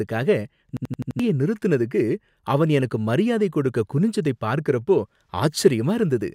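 From 0.77 to 1.20 s there is a system hang loop. The driver froze while the hardware kept replaying one 85 ms buffer, which fits a 4096-sample ring. It repeats five times at 11.7 Hz, a machine-gun stutter. About 0.4 s of audio is lost before "நிறுத்தினதுக்கு அவன் எனக்கு மரியாதை".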